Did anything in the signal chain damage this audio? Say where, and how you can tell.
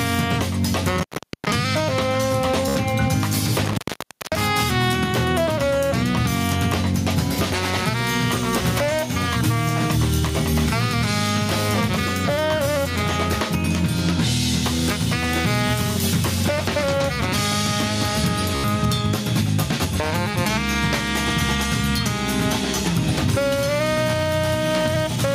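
Yes. Analogue wiring: intermittent contact at 0.98 to 1.50 s and 3.65 to 4.41 s. A loose connection opens, dropping the sound for 0.44 s and 0.59 s.

Network: Bluetooth stutter at 2.68 to 2.76 s and 18.55 to 18.64 s. A short slice repeats for 73 ms and 87 ms, which fits five and six lost packets.

Call processing: gain pumping throughout. The level swings around 5 dB, ducking on loud sounds. The likely cause is input gain set too high, feeding a fast limiter.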